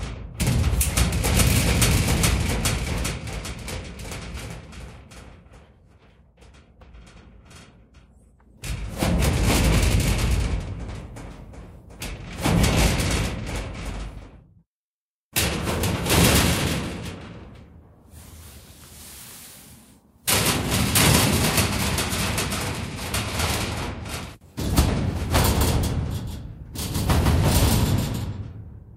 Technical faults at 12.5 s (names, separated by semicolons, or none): none